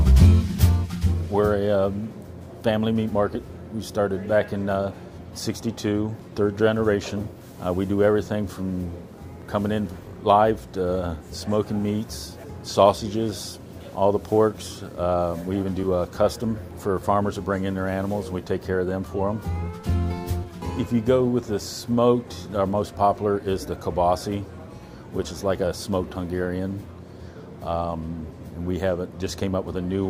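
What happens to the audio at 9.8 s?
Nothing goes wrong at 9.8 s; the audio plays through that moment intact, with no audible fault.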